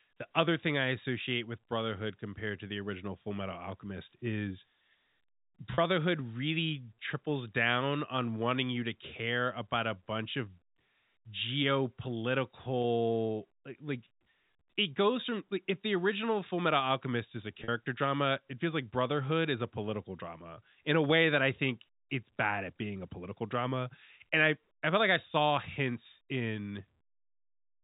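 A brief held, buzzy smear appears at 5.74–5.78 s before "really triples down on", at 12.82–12.84 s, and at 17.64–17.68 s between "is a" and "drama it feels like". These are packet loss with pitch repetition, where the last pitch period is repeated over gaps of 40, 20 and 40 ms.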